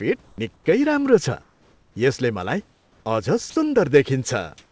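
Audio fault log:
0.24–0.38 s, 0.54–0.66 s, 1.42–1.96 s, 2.72–3.06 s and 4.58–4.72 s, comfort noise in place of the background: In each pause the room noise turns into a smooth, even hiss with no detail. It is about 6 dB quieter in the first gap, about 12 dB quieter in the second, about 4 dB quieter in the third and fourth, and about 6 dB louder in the last. The likely cause is discontinuous transmission. The sender stopped sending during pauses and the receiver synthesised noise roughly matched to a background sitting about 34 to 40 dB below the loud parts.
0.35–0.38 s, onset clipped by the voice detector: The sound that ends the first comfort-noise gap begins abruptly, its first 30 ms missing, so it snaps in without a natural soft attack. The likely cause is a voice detector that was slow to register the restart, leaving synthetic noise where the start of the sound should be.
3.50–3.56 s, sound dropped by the voice detector: For 60 ms the speech gives way to steady, featureless noise, then returns. 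The likely cause is the voice detector mistaking the sound for background and halting transmission, so the receiver filled the gap with comfort noise. The surrounding audio, band-limited to nothing above 8 kHz, fits a wideband call codec such as G.722.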